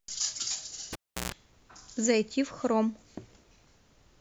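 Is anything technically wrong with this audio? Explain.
Yes. At 0.93 s the cable gets pulled and plugged in while live. There's a pop as the connection breaks, then the speech drops to near silence for about 343 ms. As the plug goes back in, only the tip touches first, so about 133 ms of 60 Hz mains buzz comes through, grounding hasn't caught up yet. A second pop lands as the contact seats and the sound comes back, with the whole thing over by 1.32 s.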